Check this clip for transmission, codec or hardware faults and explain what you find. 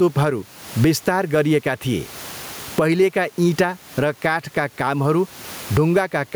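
One fault runs through the whole clip: gain pumping. The gain swings by around 20 dB. The likely cause is input gain set far too high, with a fast limiter pulling it down on each peak. The speech sounds squashed. Loud and soft parts sit close in level. The room noise sits about 35 dB below the speech.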